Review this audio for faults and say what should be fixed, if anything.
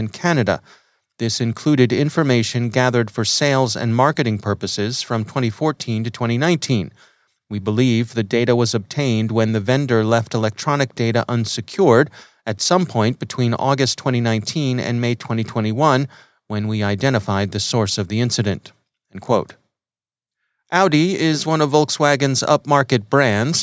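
Nothing here needs fixing, so there's no repair work to do on this speech.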